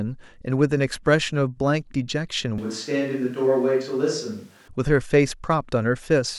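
At 2.58 s the speech suddenly turns roomy and hollow, with thinner bass. It stays that way until 4.68 s, then snaps back. The level barely changes, and room noise sits far below the speech. A switch to a distant microphone is the likely cause.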